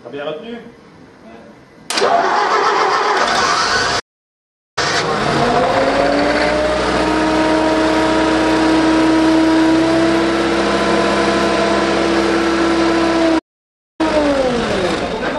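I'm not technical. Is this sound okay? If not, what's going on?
No. The player likely ran short of data, causing a playback stall: the sound cuts to silence from 3.99 to 4.78 s (about 0.77 s) and from 13.38 to 14.01 s (about 0.6 s). After each gap, the player squeezes out its backlog in a time-compressed catch-up. From 4.78 to 7.78 s the sound runs 1.15 times fast, and from 14.01 to 15.21 s it runs 1.5 times fast, hurried but at normal pitch.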